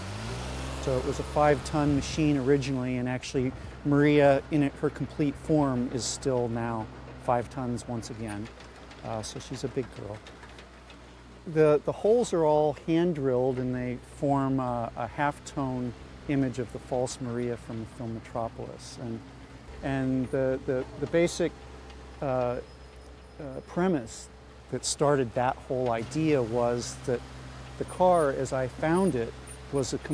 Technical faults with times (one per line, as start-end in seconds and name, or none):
none